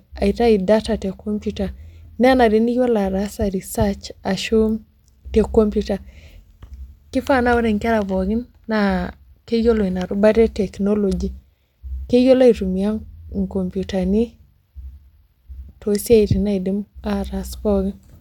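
No technical faults are audible anywhere in the speech recording.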